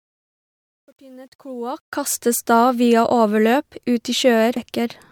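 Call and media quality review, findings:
Truncation distortion on the fade-in, 0 to 2.18 s, clearing just before "da via". Gritty, worst 0 to 1.55 s while the level's lowest. Probable gain or fade stage with no dither, grit consistent with roughly 10-bit resolution.

Damaged data in the compressed stream at 4.56 s: short glitch. Probable decoder hitting corrupt bytes, losing frame sync and jumping to the next header.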